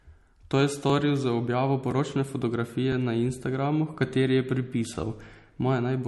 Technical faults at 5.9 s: transcoding between lossy codecs

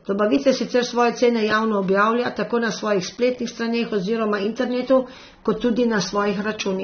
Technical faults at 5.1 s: AAC compression

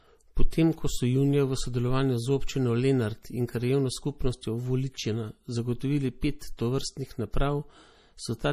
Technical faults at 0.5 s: MP3 compression; pre-echo

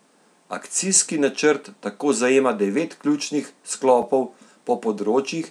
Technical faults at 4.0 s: block of digital silence

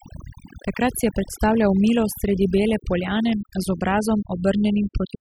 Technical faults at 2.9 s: overdone noise removal

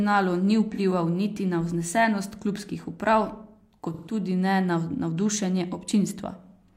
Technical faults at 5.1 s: none

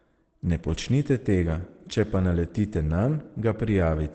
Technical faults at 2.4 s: Opus compression

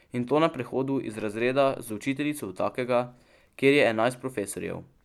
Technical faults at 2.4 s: none

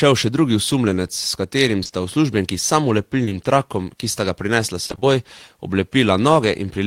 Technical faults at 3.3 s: short concealed packet loss

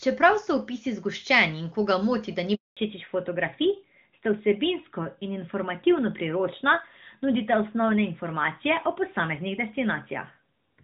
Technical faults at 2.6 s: handover gap

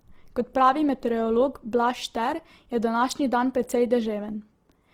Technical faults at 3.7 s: Opus compression; pre-echo

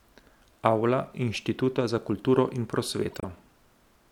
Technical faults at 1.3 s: corrupt frame decoded

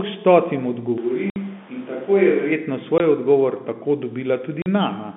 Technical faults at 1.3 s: switch to a distant microphone; packet loss filled with silence

